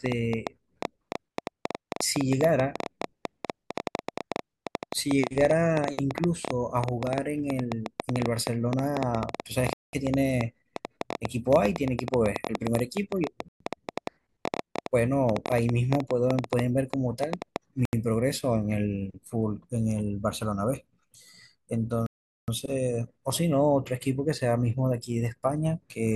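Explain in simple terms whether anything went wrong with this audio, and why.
Yes, a couple of things. First, there's a train of clicks running from 0.06 s to 17.57 s: around 150 irregular ticks, roughly nine a second, sitting on top of the speech and the pauses alike. Most likely that's interference from nearby gear or a faulty connection or power supply.

Second, you get four Bluetooth stalls, where the sound drops to silence and then carries on: at 9.73 s for 0.2 s, 13.48 s for 0.12 s, 17.85 s for 0.08 s, and 22.06 s for 0.42 s. The likely cause is wireless interference holding up packets until the headphones' buffer ran empty.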